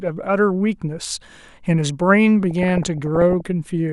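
DAB burbling runs from 2.51 to 3.47 s. Weak reception let bit errors slip past the error correction into the MP2 audio stream, and the error rate points to something around half a percent. Corrupted samples put short blips of noise into individual sub-bands, and corrupted scale factors make sub-bands jump in level for up to a frame, and the damage fits roughly forty frames. The speech takes on a burbling texture.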